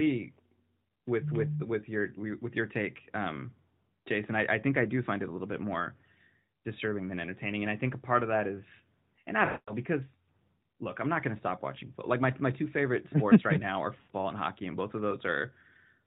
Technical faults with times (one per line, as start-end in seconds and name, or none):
9.46-9.73 lost AMR speech frames
13.98-14.13 lost AMR speech frames